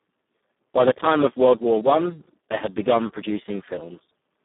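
Speech passed through the Speex codec at one of its lowest quality settings, with the damage heavy enough to suggest a bitrate around 4 kbps, and it stays that way for the whole clip. With so few bits left to code the excitation, the voice comes out hoarse, noisy and edging toward robotic. The band is held to about 150 Hz to 3.6 kHz, with nothing above 3.8 kHz, so there is no high-frequency fill at all.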